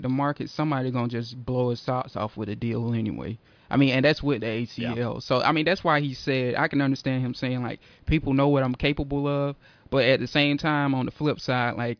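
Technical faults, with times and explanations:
Nothing stood out on listening to this speech recording.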